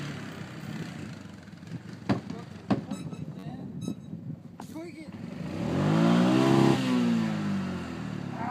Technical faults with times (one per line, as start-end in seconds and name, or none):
3.39-3.43 repeated buffer